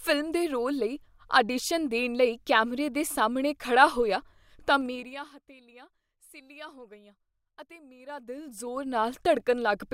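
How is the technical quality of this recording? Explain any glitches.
The recording has two level changes with audible zipper noise. From 4.79 to 5.31 s, after "ਸਾਹਮਣੇ ਖੜ੍ਹਾ ਹੋਇਆ ਤਾਂ", the level falls about 20 dB in 2 dB steps, roughly twenty a second. From 7.95 to 9.01 s, after "ਸਿੱਲ੍ਹਿਆ ਹੋ ਗਈਆਂ ਅਤੇ", it climbs back about 20 dB, roughly ten steps a second. The gain jumps with no smoothing between steps, so each jump clicks. The clicks merge into a ticking zip.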